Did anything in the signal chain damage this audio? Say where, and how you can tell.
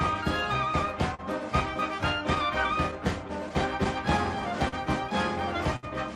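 Yes, the damage happens at the network stage, in the receiver's jitter buffer. Throughout the clip there is clock drift between sender and receiver: the sender's clock runs about 3 percent slow. The buffer keeps draining, so the receiver repeatedly stretches or repeats tiny pieces of sound. You hear small, uneven timing hiccups all the way through. On a spectrogram these show as faint vertical seams and briefly duplicated texture at irregular spacing. On the waveform they show as slight discontinuities where cycles don't line up.

There are two short stalls from a late packet. The first runs from 1.14 to 1.21 s and is bridged with 42 ms of fill. The second runs from 5.76 to 5.85 s and is bridged with 64 ms. Each time the buffer ran dry, the receiver held the last sound until the packet arrived, then resumed with nothing lost. The waveform shows a stretch of repeated cycles. The spectrogram shows harmonics frozen flat for those tens of milliseconds.

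Between 2.91 and 4.74 s there are scattered short gaps, about seven of them. Together they make roughly 100 ms of concealment, the longest near 40 ms. That is around 5 percent of that stretch. Each missing or late packet was patched by extending the preceding sound. The result is brief ticks and smears rather than silence. On the spectrogram, look for small smeared blocks where the pattern briefly stops evolving. The waveform shows short repeated segments with small joins.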